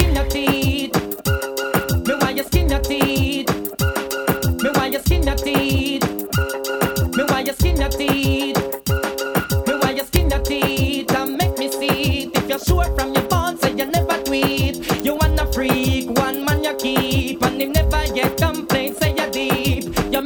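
At 0.00, 3.02, 4.11, 10.16, 15.00 and 17.77 s there are sharp, violent cracks from integer overflow. On each loud peak the signal ran past the top of the integer range, by about 1 dB at the start, about 2 dB at 4.11 s and barely at all elsewhere. Instead of being held at the limit it wrapped to the opposite extreme. Clipping flattens a peak into a dull rasp. Here the waveform jumps across the full range, giving a brief, harsh snap.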